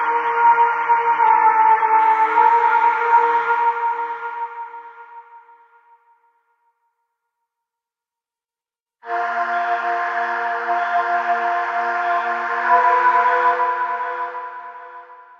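For the first 2.0 s it's the adaptive stream starting at a low bitrate: nothing comes through above about 6.3 kHz, and codec artefacts are stronger, which fits a 24 kbit/s AAC rendition. Then quality jumps suddenly with no gap, fitting a step up to 96 kbit/s.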